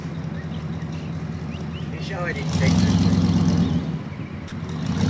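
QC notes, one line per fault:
0.6 s and 2.32 s, dropped buffer (overrun): a jump forward with no gap. Samples were likely overwritten before being read, losing about 10 ms and 30 ms.
4.48–4.52 s, sound dropped by the voice detector: 40 ms of sound gives way to steady comfort noise, likely because the detector briefly took it for background.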